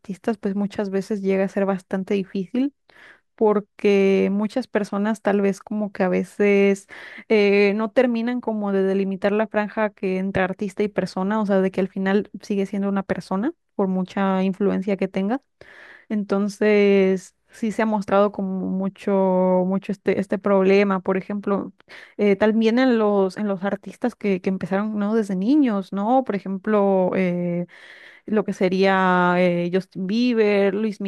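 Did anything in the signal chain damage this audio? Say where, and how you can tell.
No, nothing damaged this audio.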